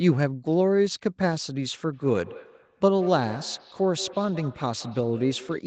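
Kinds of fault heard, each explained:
Feedback echo between two devices: two devices in the same room are joined to one call, so one plays back what the other's microphone sent, and that microphone picks it up again, outside the reach of each device's own echo canceller. From 1.93 s to the end, the speech returns at an interval of roughly a fifth of a second, each repeat thinner and more ringing, peaking at about 17 dB below the speech.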